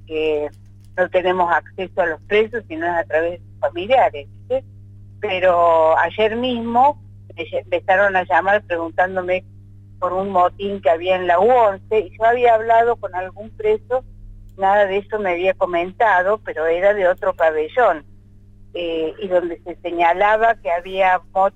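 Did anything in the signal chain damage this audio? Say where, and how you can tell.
Yes. A steady low tone sits under the sound from start to finish, a 50 Hz mains hum with some low harmonics above it, roughly 30 dB below the programme. It never changes in pitch or level and has no link to the material, so it entered as interference rather than as part of the recording. That points to the analogue wiring stage, where a ground loop or a nearby transformer let the power line couple into the signal before conversion.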